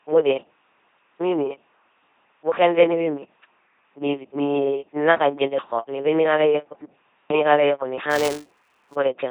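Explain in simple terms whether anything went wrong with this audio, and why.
The whole recording passes through an LPC-10 vocoder, so the speech sounds buzzy and robotic, with stray hiss or buzz wherever voiced and unvoiced moments get misjudged. Unlike a glitch, this never lets up. From 8.10 to 8.96 s there is also buffer tearing: a steady rattle at about 345 Hz, from tiny slivers of sound a few milliseconds old spliced in, heard only while speech plays.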